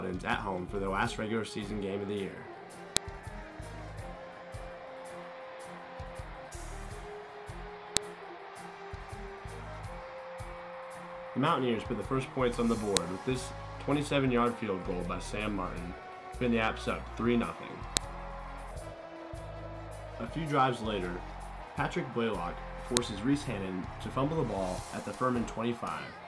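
File header played as audio produces five sharp, loud clicks at 2.97, 7.97, 12.97, 17.97 and 22.97 s, spaced exactly 5 s apart. Each snap marks the start of a new segment of a stream built from separate WAV pieces whose headers were never stripped. Those few dozen bytes of file metadata are decoded as sample values, so a brief burst of arbitrary amplitude cuts into the audio regardless of what the surrounding sound is doing.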